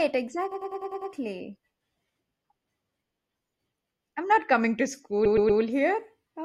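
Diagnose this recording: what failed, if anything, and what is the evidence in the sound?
Repeated frames in the coded stream, a fault at the codec or storage stage. From 0.51 to 1.11 s the same 100 ms stretch plays six extra times, and from 5.25 to 5.61 s, right after "I'm not coming to", a 120 ms stretch plays three extra times. Each block spans several compressed frames written or sent again whole, so the decoder replays them unchanged, adding 0.6 s and 0.36 s. Unlike echo or reverb, the copies are identical, don't decay, and lengthen the recording.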